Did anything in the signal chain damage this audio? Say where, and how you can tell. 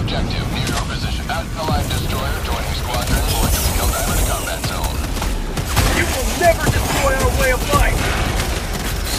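Yes, at the network or packet-delivery stage, as frames out of order. At 1.19 to 1.59 s, 3.28 to 3.68 s and 8.76 to 9.06 s the sound turns into a garbled flutter, each stretch playing with its two halves swapped. The half-lengths, 186 ms in the first two and 139 ms in the last, fit adjacent runs of four, four and three frames being decoded out of sequence. A spectrogram shows contours jumping back then forward, and no time is lost.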